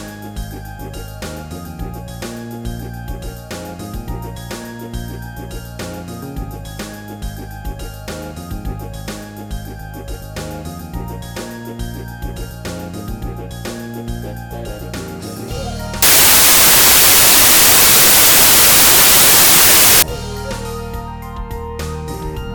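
From 16.02 to 20.02 s the samples are built from the wrong bytes, so the jittery low bits dominate and everything turns into loud, harsh broadband noise.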